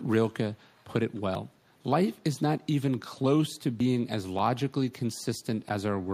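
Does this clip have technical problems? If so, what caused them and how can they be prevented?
Yes. From 0.69 to 0.84 s and again from 1.15 to 1.21 s, a very faint delayed copy of the speech trails about 304 ms behind, an echo leak most likely from a far-end loudspeaker whose echo canceller let residue back into the call. Using a headset or better-tuned echo cancellation would prevent it.

At 1.35 s and 3.80 s the speech skips abruptly, losing roughly 50 ms each time. This is audio missing between chunks: the spacing fits 2.5 s processing blocks, likely dropping a sliver at each boundary and splicing the ends together. Overlapping or gapless buffering between chunks would prevent it.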